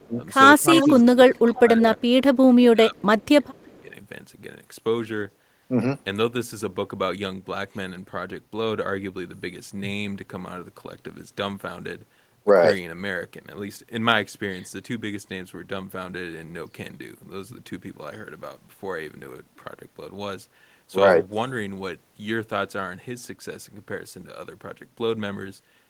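From 0.0 to 0.23 s, 0.58 to 1.08 s, 1.26 to 2.36 s and 2.52 to 3.93 s, the speech sinks in level and breaks up. The dips reach roughly 10 to 20 dB. This is speech suppressed in double talk. Likely both sides spoke at once, and the echo canceller turned down the near talker along with the echo.

Overlapping these stretches, echo leak appears at 0.74 to 1.04 s, 1.8 to 1.85 s, 2.98 to 3.02 s and 3.57 to 3.62 s. A copy of the speech returns about 350 ms late. The first scrap is loud, only about 5 dB under the speech. The second is about 10 dB under, and the last two fade to faint traces, about 35 and 40 dB under. The canceller likely missed part of the loudspeaker echo.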